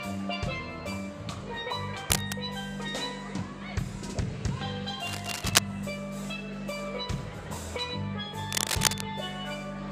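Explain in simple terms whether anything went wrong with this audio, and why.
Cable scratch noise appears three times: from 2.10 to 2.35 s, from 5.00 to 5.59 s, and from 8.50 to 9.01 s. Each time, a burst of scratchy, rustling noise rises above the sound itself. The likely cause is a worn cable, plug or control being moved. Its electrical contact flickers rapidly between good and poor, and those rapid changes turn into uneven crackle layered over the audio until the movement stops.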